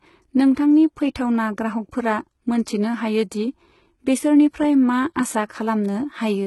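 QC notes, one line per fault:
Throughout: HE-AAC compression damage, heavy. The treble sounds synthetic, with gritty, lispy s sounds, and nothing is present above 11.8 kHz. This is likely spectral band replication rebuilding the highs from copied lower bands, which fits a very low bitrate around 16 kbps.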